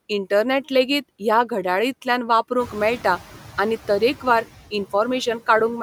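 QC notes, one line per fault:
throughout: noise suppressor artifacts. Background noise ducks between phrases and swells under speech, as band-by-band suppression cuts steady noise by about 9 dB.
2.59–3.21 s: noise suppressor catching up. Room noise jumps about 15 dB near 2.5 s and passes through reduced only about 6 dB, then sinks over 0.62 s as the noise estimate adapts.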